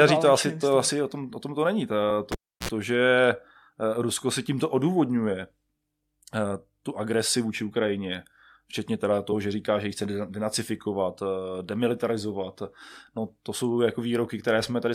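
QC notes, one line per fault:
2.09 s and 9.31 s, damaged data in a compressed stream. Short glitches follow "o tom to není" and "včetně teda", the second just before "že říká že ji". Corrupted frames threw the decoder off. It lost sync and skipped ahead to the next header.
2.32 to 2.69 s, cable pulled and plugged in. A pop, then near silence for about 0.32 s. Next comes a 54 ms burst of 60 Hz mains buzz while only the plug tip made contact. A second pop marks the signal returning.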